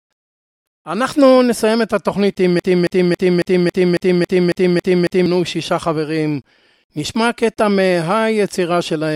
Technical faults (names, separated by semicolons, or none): broken-record loop